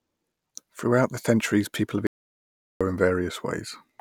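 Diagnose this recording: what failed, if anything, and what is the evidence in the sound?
An audio dropout to silence runs from 2.07 to 2.81 s, just after "the centuries people have". Speech stops mid-flow for about 0.74 s of silence with no room tone, a flat waveform line and a blank spectrogram column. Likely a lost input link while recording continued.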